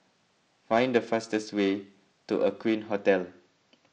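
From 0.0 to 2.76 s, periodic clock jitter near 1 kHz puts sidebands on the speech, a metallic roughness that, unlike hiss, vanishes in pauses.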